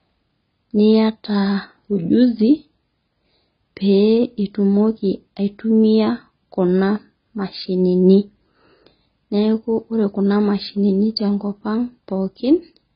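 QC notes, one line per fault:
Throughout: AAC compression, likely from a low-bitrate AAC-LC encode around 16 kbps; the speech sounds dull and warbly, with nothing above about 5.1 kHz.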